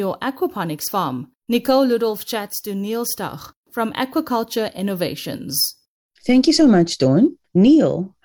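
No technical faults can be heard anywhere in the speech. There is no moment that needs a time or a value noted.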